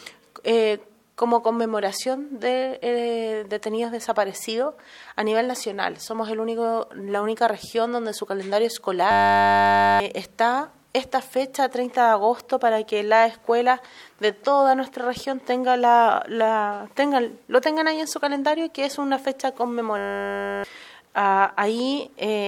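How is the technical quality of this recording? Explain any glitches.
Two glitches mar the recording. From 9.11 to 10.0 s and again from 19.98 to 20.64 s, the sound collapses into a steady 100 Hz buzz. This is a system hang loop: the system froze while the sound hardware kept replaying one 10 ms buffer, dropping roughly a second and then most of a second of audio.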